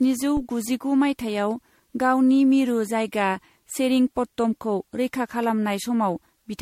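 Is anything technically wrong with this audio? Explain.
Yes, there are two faults. Throughout the speech there is a swirly, smeared, hollow quality, with blurred consonant attacks and nothing above 16.5 kHz. This is likely generation loss: the sound fits MP3 at around 63 kbit/s re-encoded roughly seven times. Each new pass quantises on a shifted frame grid, so noise and spectral holes accumulate. That makes it sound worse than a single encode at that bitrate, which would be band-limited but not this hollow.

From 0.37 to 0.43 s there is a phantom power thump. A supply switching on a live input sends a voltage step through the coupling capacitors, producing a deep thump that dies away in about 14 ms. Unlike a plosive, it is a pure low-frequency step with no breath noise attached.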